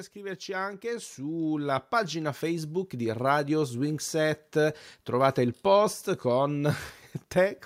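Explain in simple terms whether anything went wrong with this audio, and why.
Automatic gain rising happened here. The recording system judged the input too quiet and gradually turned its own volume up between 0.13 and 4.1 seconds. As a result, the speech and the background noise both swell louder together over those four seconds.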